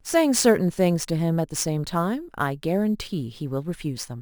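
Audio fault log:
throughout, crude rate conversion: the speech carries a gritty, inharmonic fizz that rides on louder syllables and bright consonants. The rate was changed without a proper filter by picking the nearest existing sample, so samples are repeated in a cycle set by the ratio of the two rates, which fits a step from 32 kHz up to 44.1 kHz. That irregular repetition adds tones unrelated to the speech, roughly 20 dB below it.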